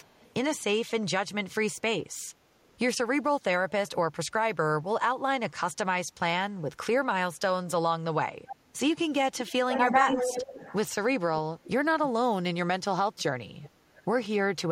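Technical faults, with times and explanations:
0.02–0.31 s, 9.36–10.75 s, 11.64–11.68 s and 13.18–14.04 s: echo leak. A delayed copy of the speech returns 413 ms later. It is very faint at the start, nearly as loud as the direct speech around 9.4–10.8 s, and weak elsewhere. The likely cause is far-end loudspeaker sound slipping past an echo canceller. On a spectrogram, harmonic traces repeat, offset 413 ms.
7.54–8.75 s, 9.66–10.19 s and 12.39–12.87 s: speech suppressed in double talk. The speech dips while the other side talks, most deeply at about 35 dB in the first stretch. This is likely an echo canceller turning down both talkers at once. The waveform shows sudden notches, and the spectrogram shows faded gaps.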